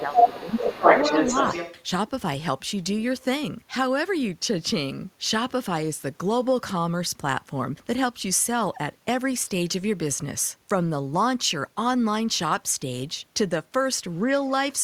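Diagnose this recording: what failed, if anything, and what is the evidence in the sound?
Speech suppressed in double talk, a call-processing fault: from 0 to 0.83 s the talker dips by as much as about 10 dB for most of that stretch, and again briefly by about 5 dB at 14.25–14.32 s. This is likely an echo canceller ducking both voices while they overlap. It differs from a network dropout because the level is attenuated rather than silenced.

Other side's voice leaking through, also call processing: a second voice sits under the talker from 0 to 1.83 s, at about 5 dB above the talker's own level. The likely cause is incomplete echo cancellation of the far end playing on the loudspeaker. Unlike analogue crosstalk, the leaked voice arrives through the microphone acoustically and overlaps the same opening stretch where the talker is ducked.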